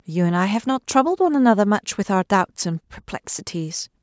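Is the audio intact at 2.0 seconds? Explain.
Yes, the speech at 2.0 seconds is intact, with nothing breaking or disturbing it at that moment.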